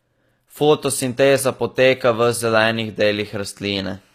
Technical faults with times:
0.00-4.15 HE-AAC compression

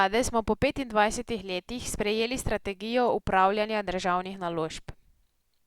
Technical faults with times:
none

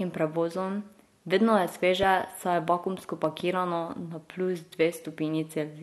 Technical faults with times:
2.03-2.05 loud pop
3.24-3.42 loud pop

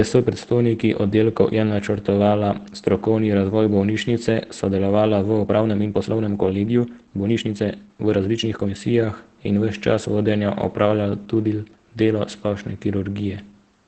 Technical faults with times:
0.00-13.87 Opus voice compression
5.38-8.76 time-stretched section

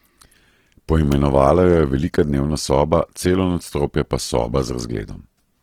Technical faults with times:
0.00-5.63 Opus compression
1.12 electrical switching spike

